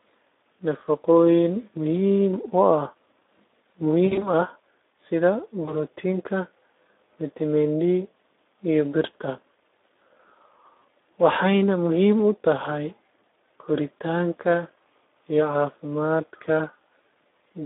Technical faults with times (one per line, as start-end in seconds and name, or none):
0.00-17.66 Speex codec
4.05-4.28 VoIP packet loss concealed by the speech codec
5.66-5.78 VoIP packet loss concealed by the speech codec
10.80-10.83 VoIP packet loss concealed by the speech codec